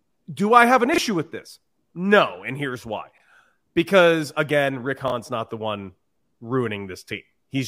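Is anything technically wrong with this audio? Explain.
Yes, there are three spots where chunks play out of order. At 0.94 to 0.98 s, between "do I have an" and "with this", at 3.12 to 3.2 s, right after "here's why", and at 5.08 to 5.12 s, just before "not the one", a short piece of audio turns up after the bits meant to follow it. Nothing goes missing, but each reshuffle leaves hard joins and a brief jumbled smear. The lengths fit 20 ms chunks, one slipping a single place at 0.94 s and 5.08 s, and about three places at 3.12 s.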